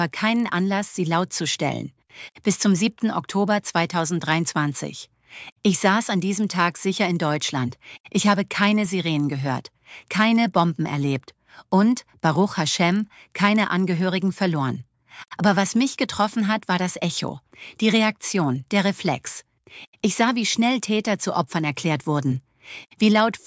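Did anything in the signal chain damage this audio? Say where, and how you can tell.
Yes. A resampler restarted on every block, at the sample-rate conversion stage from 24 kHz to 16 kHz, leaves a 25 Hz ticking buzz throughout, one tick per 40 ms block, since each block's edges are filtered without their true neighbours. Unlike hum, it stops when the signal does.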